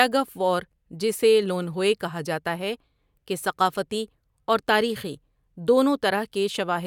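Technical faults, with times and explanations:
No technical faults can be heard anywhere in this recording.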